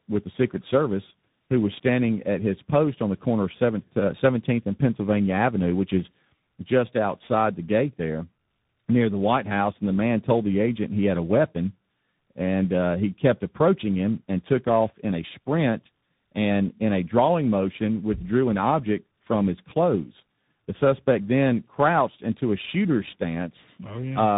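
Tandem speech coding runs throughout. The speech was decoded and re-encoded across links, likely a low-rate coder then CVSD. It sounds rough, muffled and warbly, with nothing above 3.8 kHz.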